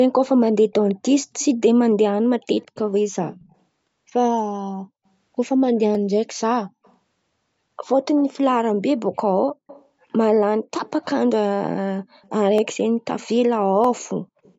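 Right from 0.28 to 1.45 s there's an echo leak. A faint copy of the voice trails it by 157 ms, sitting roughly 25 dB under the speech. It comes back at 2.58–3.55 s and 6.39–6.95 s. It's likely the far end was on a loudspeaker and its echo canceller let some of our voice slip back. At 5.95 s a single sharp click pops out, dropped samples. That's likely a fraction of a millisecond missing, so the waveform jumps. The echo returns at 9.67–9.87, 10.86–11.05 and 12.23–12.28 s, now lagging by 189 ms. Two more clicks land at 12.58 and 13.84 s. A last echo scrap appears at 14.43–14.54 s.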